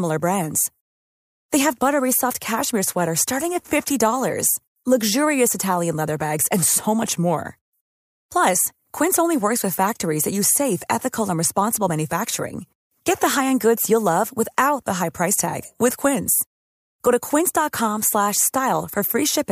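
No technical faults can be heard anywhere in the recording. There is nothing in the speech to place on a timeline of faults.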